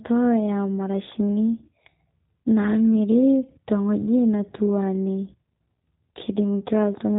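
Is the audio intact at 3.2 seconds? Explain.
No. At 3.2 seconds, as throughout the clip, the speech carries G.729 codec damage, consistent with an 8 kbit/s G.729A stream. The codec resynthesises the speech from a vocal tract filter, a pitch predictor and sparse pulses, so it sounds plainly rough and synthetic, with nothing above 3.8 kHz.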